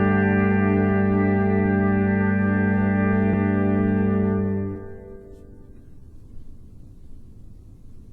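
At 3.33 s, 4.75 s and 6.83 s, compressed frames are skipped: the audio jumps ahead by roughly 70 ms, 100 ms and 200 ms, consistent with dropped 20 ms codec frames.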